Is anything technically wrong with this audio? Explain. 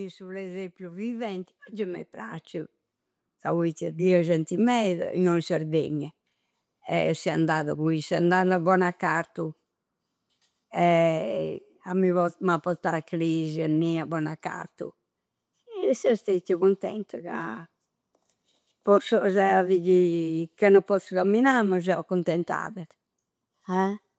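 Yes. From 0.18 to 4.09 s, just before "genti meda innoi in", there is automatic gain rising. The gain control judged the input too quiet and raised it by about 13 dB over nearly four seconds, so the speech and the background noise swell together.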